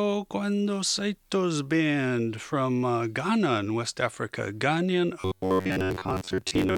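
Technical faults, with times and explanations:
5.21 to 6.77 s, robotic sound from repeated short buffers: the speech becomes a rigid buzz at 93.8 Hz, likely from a chunk of about 10.7 ms being replayed in place of most of the real audio. Unlike codec warble, the buzz rate stays fixed whatever the pitch.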